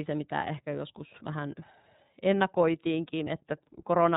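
The whole clip runs through the iLBC codec. Nothing above 4 kHz gets through, so the speech sounds narrow and dull. The damage is plainly audible. Each frame's excitation is coded on its own, and this gives the voice a slightly rough, synthetic grain. The sound fits the 30 ms frame mode at about 13.3 kbps.

From 3.24 to 3.28 s there are lost iLBC frames. The gap of about 30 ms fits a single missing frame. The decoder fills it by repeating the last pitch cycle mixed with noise. This is heard as a brief held, faintly buzzy vowel. Frames do not depend on earlier ones, so the voice returns cleanly right after the gap.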